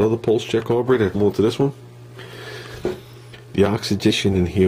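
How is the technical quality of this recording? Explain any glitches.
Two brief glitches mar the recording, at 1.14 s and from 4.09 to 4.11 s. Both are damaged data in a compressed stream: corrupted bytes make the decoder misread frames and resync, heard as a chirp, squawk, click or short hole.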